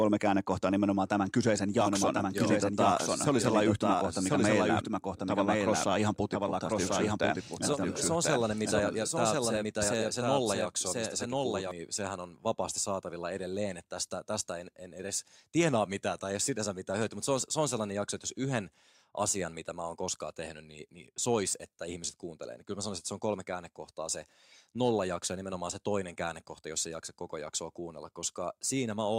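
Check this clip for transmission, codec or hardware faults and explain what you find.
One fault is present, a doubled audio track from 1.81 s to 11.71 s. The speech is mixed in twice, with a second full-band copy trailing the original by about a second and sitting around 5 dB lower. The likely cause is a second capture through a slower path, or an edit that left two copies out of step. The copy has no decay or room colour, and it cuts in and drops out abruptly at those times.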